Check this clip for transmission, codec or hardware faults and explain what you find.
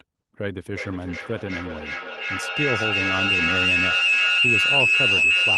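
There's one fault here: a feedback howl from 0.58 s to the end at 5.58 s. A microphone-to-loudspeaker loop keeps adding gain each pass, so it narrows onto a tone around 3 kHz, pulsing roughly every 400 ms and peaking about 8 dB above the speech.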